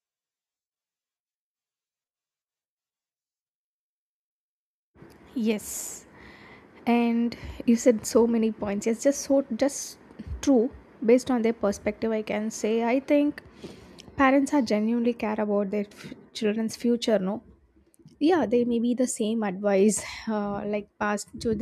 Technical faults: none

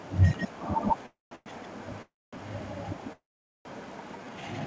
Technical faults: echo leak; call audio freeze; jitter buffer slow-down

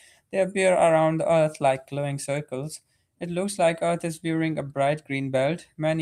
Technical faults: none

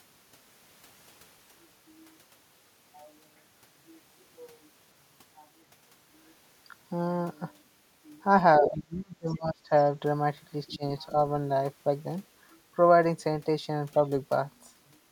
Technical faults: speech suppressed in double talk; other side's voice leaking through

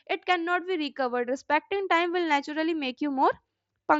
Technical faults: none

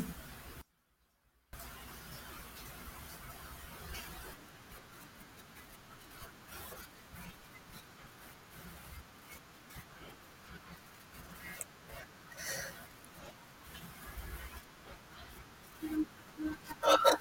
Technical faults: audio dropout to a faint residue

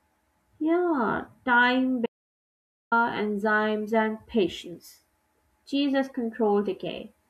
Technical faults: audio dropout to silence

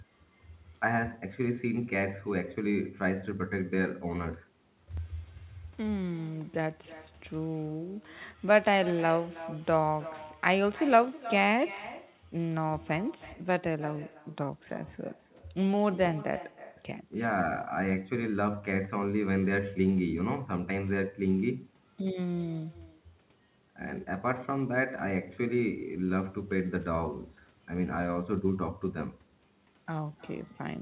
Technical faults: echo with no canceller

